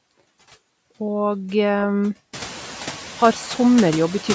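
Throughout the speech, the background noise drops away between phrases and swells back under each one. These are noise suppressor artifacts: the suppressor pulls down the bands it judges to be steady noise, frame by frame, by about 11 dB. The room noise climbs by about 16 dB from around 2.5 s, after which it sits only about 17 dB below the speech. The band tops out at 8 kHz, which fits ordinary call microphone processing.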